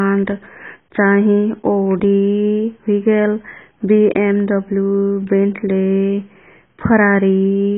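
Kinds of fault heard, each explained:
AAC compression: the speech was likely pushed through an AAC-LC encoder at a very low rate, consistent with about 16 kbps. The codec discards everything above 3.8 kHz and coarsely quantises what remains, so the whole clip sounds dull, muffled and heavily smeared.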